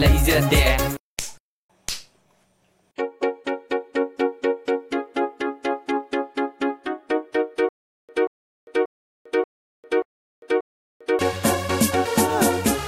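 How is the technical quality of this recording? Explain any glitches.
One glitch stands out, a stutter with silent gaps. From 7.69 to 11.19 s, a 184 ms burst repeats six times. Each repeat is followed by 399 ms of digital silence. The stream likely stalled and replayed its last fragment at each retry. The intended audio is lost.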